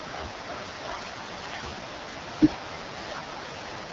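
Speech carried throughout by the AMR wideband (HD Voice) codec at a low rate, and the sound fits 6.6 kbit/s, the bottom of AMR-WB's range. At that rate the pulse-driven vocal tract model has too few bits to follow the excitation, so the speech comes out rough and raspy with heavy coding damage. Nothing is present above about 7.4 kHz, and the top band above 6.4 kHz is synthetic shaped noise rather than real detail.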